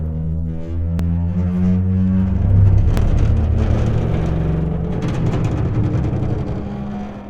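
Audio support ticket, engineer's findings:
Audio missing between chunks: brief skips at 0.99, 2.97, 4.95 and 6.93 s, each losing about 20 ms, joined without silence. Regular 2.0 s spacing points to a likely chunked recorder or processor dropping samples at each handover. Waveform: abrupt step at each join. Spectrogram: thin vertical broadband line.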